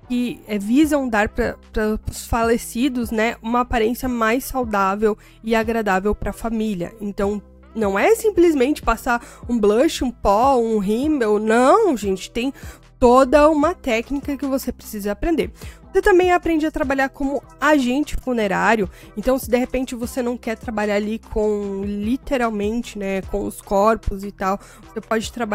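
No dropouts, clicks, distortion or level faults turn up anywhere in the recording.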